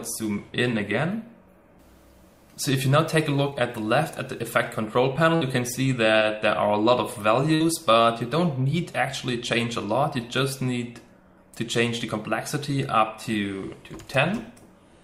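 At 3.49 to 3.54 s and again at 6.19 to 6.23 s, the audio briefly smears or wobbles. This is short concealed packet loss: 20 ms never arrived, and the receiver extended the preceding sound for about 20 ms before blending back. At 5.36 to 5.43 s and 7.55 to 7.62 s, the sound holds as a fading buzz or hiss, then jumps ahead. This is a burst of packet loss, where just over 50 ms of continued sound stands in for 60 ms that is gone.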